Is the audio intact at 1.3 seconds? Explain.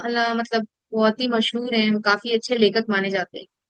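No. Around 1.3 seconds the speech is affected by clock drift between sender and receiver, with the sender's clock running roughly 4 percent fast. This shows up as repeated timing corrections from 0.05 to 3.66 s: the receiver keeps trimming short pieces to drain its filling jitter buffer, pushing playback to about 105 percent speed.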